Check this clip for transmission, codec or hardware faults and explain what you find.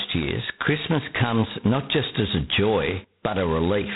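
One codec fault runs through the whole clip.

G.726 ADPCM, throughout: each sample is coded as a few bits of difference from an adaptive prediction, and here so few bits remain that the severe quantisation noise points to the 16 kbit/s mode. The speech carries a harsh, rasping hiss that rises and falls with its level, and nothing passes above 3.8 kHz.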